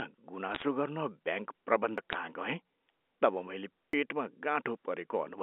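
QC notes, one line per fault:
0.55–0.64 s and 2.12–2.14 s, bit errors on a digital phone line: flipped bits corrupt single G.711 samples, so sign or high-bit hits snap into sharp ticks and brief crackle over intact speech.
1.98 s and 3.93 s (just after "तब मैले"), audio missing between chunks: roughly 40 ms vanishes and the edges butt together, a skip recurring every 2 s that likely comes from audio lost at chunk handovers.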